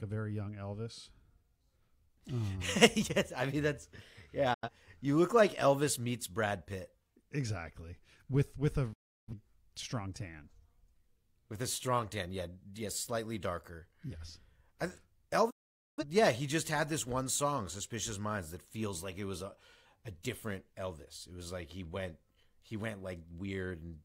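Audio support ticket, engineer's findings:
Digital broadcast dropout: receiver losing signal or rejecting corrupt frames, muting until valid frames return. Speech fades out over 8 ms to silence, three times: 4.54–4.69 s, 8.93–9.34 s (after "with with a", resuming at "strong tan"), 15.50–16.04 s. Gaps of roughly 85, 340 and 470 ms fit whole lost frames of about 43 ms each. Audio sent during the gaps is lost.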